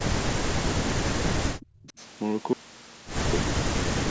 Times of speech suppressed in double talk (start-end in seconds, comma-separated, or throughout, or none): 0.64-2.00, 3.43-3.51